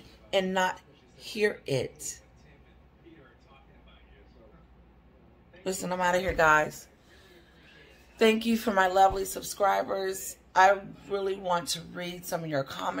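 Listening through the recording, nothing stood out as a technical problem at any point.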